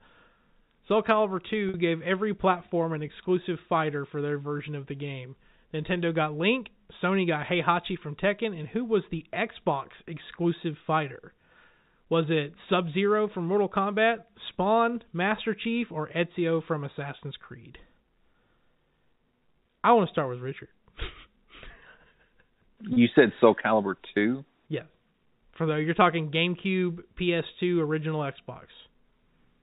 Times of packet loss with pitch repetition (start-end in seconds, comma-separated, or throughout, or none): 1.69-1.74